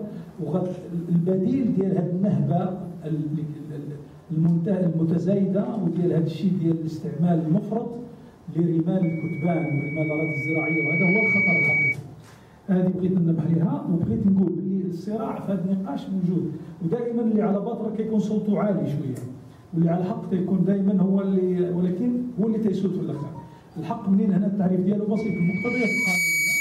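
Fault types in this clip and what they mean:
Loudspeaker feedback squeal: a microphone is picking up the loudspeaker it feeds, and near 2.3 kHz the loop gain rises past one, so that frequency keeps reinforcing itself. The result is a single tone that swells out of the sound. It happens first from 9.02 to 11.96 s, building over about two seconds to sit a little above the programme. It returns at 25.16 s, reaching roughly the programme's level within about a second and continuing to the end.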